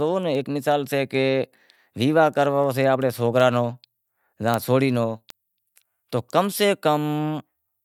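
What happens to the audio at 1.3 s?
At 1.3 s the speech sits inside a run of word clock ticks that spans 0.35 s to 7.59 s. The receiving device runs on its own clock rather than locking to the sender's, and the two drift apart by roughly 50 parts per million. Each time they slip past one another, a single sample is dropped or repeated, producing a sharp tick about every 0.4 s, around twenty in all.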